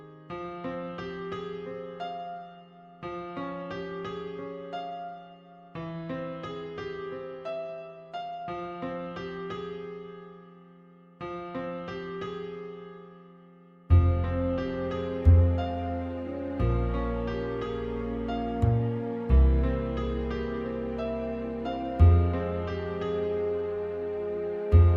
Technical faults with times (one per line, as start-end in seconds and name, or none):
none